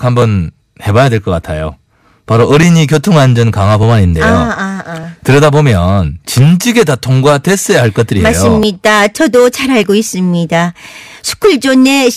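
Hard clipping runs through the whole speech clip: peaks are driven about 10 dB past full scale and cut flat, giving a harsh fuzz on loud syllables rather than isolated crackles. From 0.22 s to 11.04 s, a click recurs every 1.2 s, about ten in all. Its strict regularity, unrelated to loudness, marks these as clock drift buffer slips, each likely a few dozen samples dropped or repeated as two clocks diverge.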